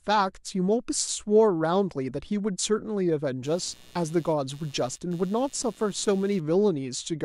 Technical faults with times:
3.44-6.40 computer activity noise

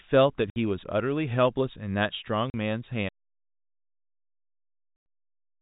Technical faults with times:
0.50-0.56 packet loss filled with silence
2.50-2.54 packet loss filled with silence
3.09-5.61 audio dropout to silence
4.96-5.06 packet loss filled with silence

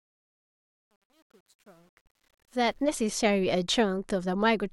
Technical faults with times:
0.00-2.84 truncation distortion on a fade

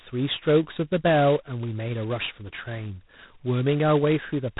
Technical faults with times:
0.00-4.60 G.726 ADPCM

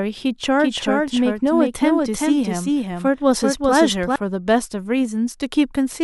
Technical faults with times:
0.60-4.16 doubled audio track

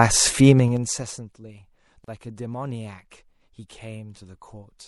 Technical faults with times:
0.00-4.88 MP3 compression
0.51-1.19 zipper noise
2.04-2.08 gap at a join of encoded pieces

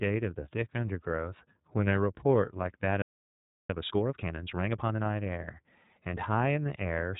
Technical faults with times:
0.00-7.20 iLBC codec
3.02-3.70 playback stall
3.70-5.04 time-compressed catch-up

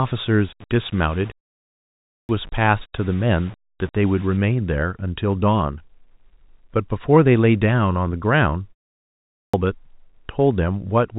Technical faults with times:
0.00-4.37 low bit depth without dither
1.79-2.29 clipped start after a pause
9.05-9.54 clipped start after a pause

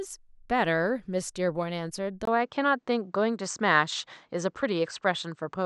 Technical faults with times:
2.25-5.66 input switched to a poorer device

